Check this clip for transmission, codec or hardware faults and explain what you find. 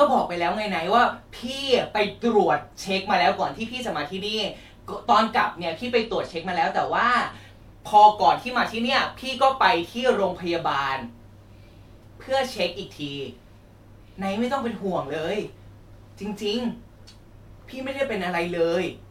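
One fault stands out in the speech: a Bluetooth SBC bit pool drop from 5.97 to 7.36 s. Starved of bits, the encoder leaves the upper sub-bands nearly empty and quantises the rest coarsely, which fits a bit pool falling from 31 to 15, around 105 kbps. The treble dulls and gritty noise rises. On a spectrogram the top band goes dark and speckled noise fills the lower bands until recovery.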